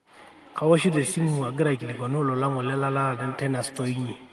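Speech carrying echo with no canceller throughout: the far end's loudspeaker feeds its microphone, returning a thinner copy about 13 dB down roughly a fifth of a second later, seen as faint duplicate energy trailing each burst on the waveform and spectrogram, below a codec band edge near 12 kHz.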